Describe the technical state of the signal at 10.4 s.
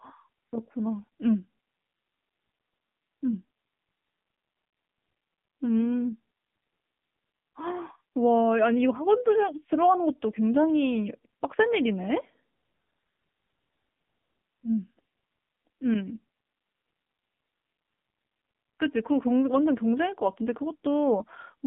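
At 10.4 s the speech passes through an AMR narrowband mobile codec, as it does throughout. Pulse-driven vocal-tract modelling in 20 ms frames makes it plainly buzzy and synthetic, which fits a low mode near 7.4 kbps. A spectrogram shows energy confined between 150 Hz and 3.5 kHz.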